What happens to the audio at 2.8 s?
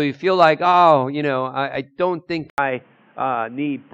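From 2.5 s, just after "I I don't think", the input switched to a poorer device, likely a narrowband mic. After an 80 ms gap, nothing above 3.5 kHz comes through, so 2.8 s sounds dull and boxy, with new noise about 35 dB down.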